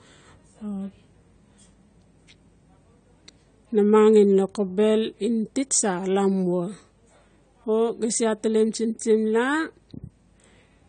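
Throughout, the speech sounds dull and smeared, with plainly audible codec damage and nothing above 9 kHz, likely from AAC compression at a low bitrate, around 32 kbps.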